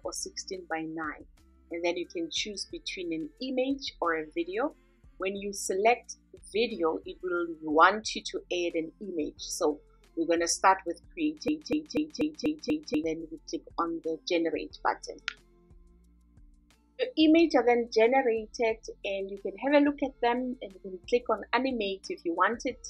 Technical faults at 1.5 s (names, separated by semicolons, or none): none